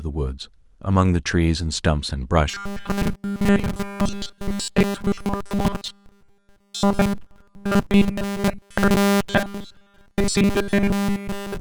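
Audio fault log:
2.50–11.61 s robotic sound from repeated short buffers: new audio likely arrived too seldom, so a roughly 5 ms slice kept repeating almost continuously, imposing a rigid, metallic 200 Hz buzz on the speech.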